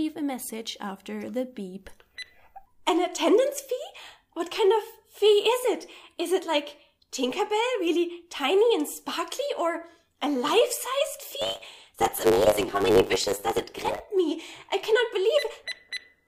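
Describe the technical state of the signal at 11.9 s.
At 11.9 s the signal is inside a block size mismatch (truncated) that runs from 11.41 s to 14.00 s. One processing stage is producing longer blocks than the following stage consumes, so the tail of every block is discarded. The regular cut points create a buzz at 100 Hz, and because material is skipped, the audio plays about 1.09 times faster while keeping roughly its normal pitch.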